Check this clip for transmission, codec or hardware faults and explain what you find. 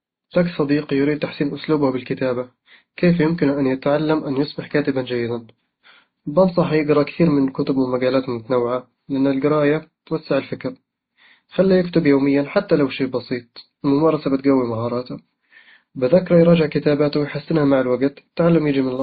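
The speech carries one fault, present throughout: transcoding between lossy codecs, likely. Nothing sounds above 4.7 kHz, and the artefacts of different codecs are heard together. A single low-bitrate codec gives one consistent texture, but here mismatched artefact types stack together, which points to a very low-rate MP3 pass re-encoded twice, ending in WMA.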